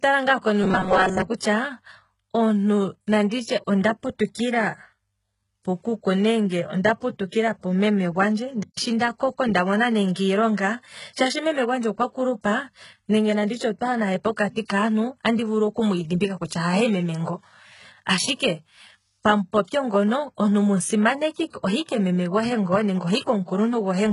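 From the start the whole clip carries heavy damage that's likely HE-AAC compression, with nothing above 11.1 kHz. The treble is rebuilt by copying lower bands upward, which fits a very low bitrate around 12 kbps, so the s sounds come out gritty and metallic.

From 0.64 to 1.22 s there's robotic sound from repeated short buffers, likely because audio arrived too seldom. Over most of that stretch a chunk of roughly 5 ms gets looped, laying a rigid 188 Hz buzz over the speech.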